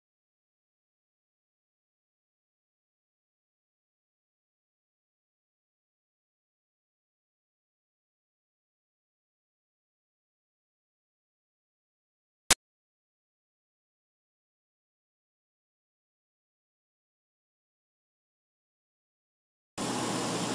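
File tags played as audio appear from 12.51 to 12.53 s. A block of compressed data, here an embedded cover picture, was read as though it were sample values. Because that data is dense and close to random, it comes out as very loud white noise. The burst starts and stops abruptly, with hard edges, and lasts only about 23 ms, so it is heard as a short, sharp blast of static cutting into the audio.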